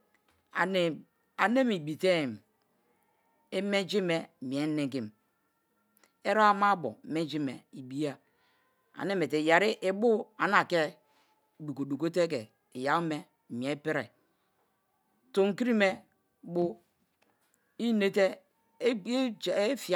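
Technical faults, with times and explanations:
No technical faults can be heard in this speech recording, and the signal holds steady with no dropouts, clicks, distortion or level problems at any point.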